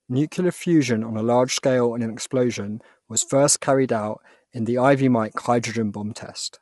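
Low-delay AAC compression runs throughout: the speech sounds plainly rough and grainy, with nothing above 11.7 kHz. The likely cause is AAC-ELD, whose short frames resolve pitch harmonics poorly, at a rate that fits roughly 32 kbps.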